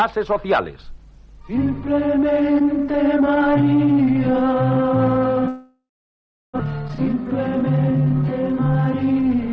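From 5.48 to 6.62 s there is what sounds like a long network dropout, likely a break in packet arrival. The last sound is stretched into a fading buzz, then about 0.69 s of near silence, and the audio resumes with roughly a second of material gone. A spectrogram shows smeared, decaying harmonics followed by an empty band-limited gap.

From 7.39 to 8.13 s a jitter buffer speed-up plays the audio about 7% fast. Short pitch-period slices, around 50 ms in total, are cut to shrink the queued delay, so it sounds hurried at unchanged pitch. The waveform looks compressed in time, and the spectrogram keeps the same harmonic spacing. Across the clip the spectrum stops at 8 kHz, consistent with a G.722 call codec at 64 kbps.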